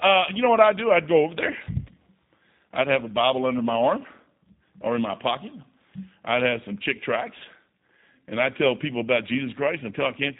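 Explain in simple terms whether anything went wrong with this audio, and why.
The speech has been squeezed through the G.729 codec, a low-rate phone codec, and you can hear it from start to finish. Everything above roughly 3.8 kHz is gone, so the voice sounds boxed-in and dull. The codec doesn't store the actual sound. It keeps a rough model of the throat's shape, the pitch, and a few pulses per tiny slice, then rebuilds the speech from those, which leaves it clearly rough and slightly synthetic.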